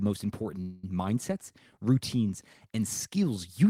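From 0.61 to 0.84 s the speech stalls in a call audio freeze: the last sound is held as a fading buzz or hiss for about 0.22 s, then resumes intact at "mindsets routines and". This likely reflects delayed packets draining the jitter buffer, inserting a gap rather than losing speech.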